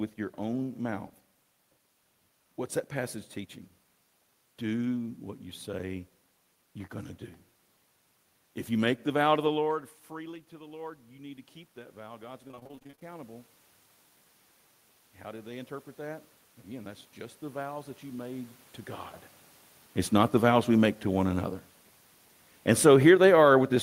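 From 10.49 s to 18.58 s, automatic gain rising: after the level at the microphone dropped by about 17 dB around 9.5 s, as the talker moved back, the gain control slowly added about 13 dB, so voice and room noise swell together over several seconds.

Within that rise, from 12.47 s to 13.03 s, repeated packet loss produces robotic sound. A rapid string of short holes, the longest 27 ms, is patched by extending the preceding sound. About half of this half-second is filled-in audio, so it sounds choppy.

From 20.06 s to 23.56 s, automatic gain falling: the gain control found the input too loud or its background too strong, and pulled its gain down by about 5 dB. The sound sinks gradually, with the room noise dropping along with it.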